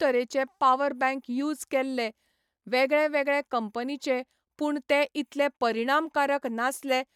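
Nothing in this speech recording points to a technical fault anywhere in the signal.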